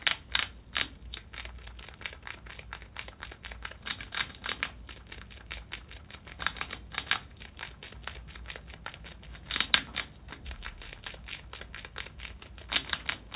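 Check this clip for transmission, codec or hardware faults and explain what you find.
Nothing in this recording of sounds points to a transmission, codec or hardware fault; the signal stays continuous throughout.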